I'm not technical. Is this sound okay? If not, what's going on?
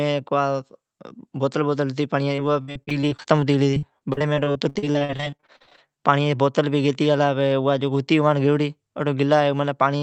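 No. From 2.35 to 5.89 s the speech turns choppy and robotic, with small pieces missing. This is repeated packet loss: dozens of bits of audio, up to 61 ms each, were lost or arrived too late, and the call patched each hole by stretching the previous sound.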